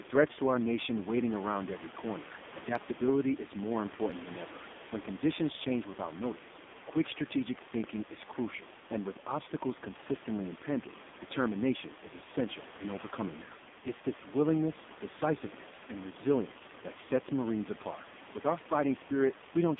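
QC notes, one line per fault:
Throughout, AMR narrowband mobile codec: the speech is confined to 200 Hz to 3.6 kHz and sounds heavily buzzy and synthetic, fitting a low mode near 5.9 kbps. Unlike a plain telephone filter, the pulse-driven vocal-tract model reshapes the voice itself, not just its bandwidth.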